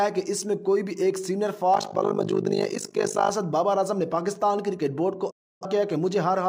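From 1.74 to 3.31 s there is overlap-add ripple. Windowed frames were rejoined with an overlap whose gains do not sum evenly. The level swings by about 60 dB around 50 times a second. It sounds like a harsh, rough flutter.

At 5.30 s comes a digital broadcast dropout. The receiver lost good frames and muted. The sound fades out within 8 ms and stays silent for about 0.3 s, which fits seven lost frames. It returns at 5.66 s, with that stretch missing.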